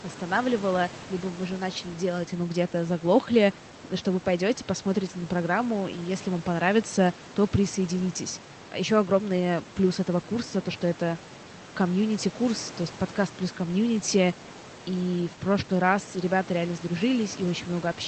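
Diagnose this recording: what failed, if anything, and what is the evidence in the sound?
Nothing's actually broken here: the room noise sits about 20 dB under the speech, and the band-limited top end with coding texture is just what you'd expect from a call path, which fits Opus at around 20 kbps with an 8 kHz bandwidth.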